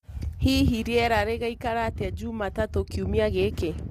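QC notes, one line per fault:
Throughout: low-delay AAC compression. The speech sounds rough and grainy for the whole clip, and the damage is plainly audible. Noise fills the gaps between the voice's harmonics. The top band sounds thin and synthetic. The likely cause is an AAC-ELD encoder, the low-delay AAC of video calls, at a rate that fits about 32 kbps. Its short frames resolve pitch harmonics poorly and use bits wastefully. Too few bits remain for clean harmonics or a natural top band.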